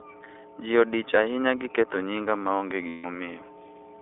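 Mains hum at 60 Hz runs through the whole recording, a steady low tone sitting under the speech from first to last. A ground loop or a nearby transformer has let the power line leak into the signal path, and the hum is strong, roughly 10 dB below the speech itself. It fills the pauses between phrases and gives the whole recording a constant droning floor that never changes pitch or level.

The iLBC codec also shapes the entire clip, and its damage is plainly audible. The speech is confined to a telephone band of about 300 Hz to 3.6 kHz, so it sounds thin and boxed-in, with a rough, slightly synthetic edge. The coding fits a 20 ms frame size and points to a rate near 15.2 kbps.

Lost iLBC frames cause a break from 2.88 to 3.06 s, right after "gi ketho nyinga maonge". For those 160 ms, which matches about eight 20 ms frames, packets went missing. The decoder filled the gap by repeating its last pitch cycle mixed with noise. 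The result is a held, buzzy, breathy vowel where real speech should be, and the voice returns cleanly almost at once after the gap.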